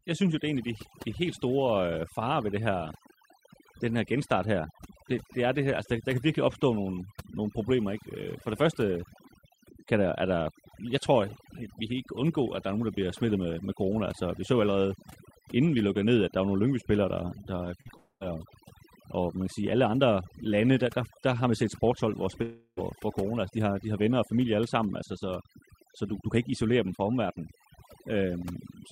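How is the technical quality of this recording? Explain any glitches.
The technical quality is poor. Heavy processing affects the whole clip, and the transmission breaks up three times around 18 s and again at 22.4 s.

Overdone noise removal runs throughout the speech. The suppressor pushes individual frequency bands down whenever they sit near its noise estimate, so quiet parts of the voice are removed with the hiss. The background is near-silent with twinkling specks. Unlike a dropout, this processing never stops.

Short concealed packet loss occurs at 17.81–17.87 s and again at 17.87–17.91 s, with about 40 ms and then 20 ms of audio missing. The decoder patched each gap by extending the preceding sound and then blending back. The result is a brief smear or wobble, not a gap, too short to be heard as silence.

A long network dropout is the likely cause of the breaks at 17.97–18.22 s and 22.42–22.79 s. 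Roughly 240 ms and 340 ms of speech never arrived. The receiver stretched the last sound into a fading buzz or hiss, which collapses into about 50 ms of silence before the speech resumes further on. That audible fade and the hole are what set these apart from the brief packet smears.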